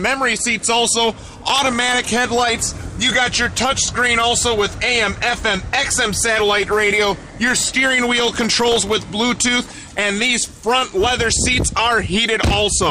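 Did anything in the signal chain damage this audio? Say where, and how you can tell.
Yes. Processor overload crackle at the driver or buffer stage, from 1.50 to 2.10 s and 8.17 to 8.93 s. Gritty crackle rides on the sound, then stops. Dozens of tiny buffers, each under a millisecond, missed their deadlines. Each left a hard-edged silent gap.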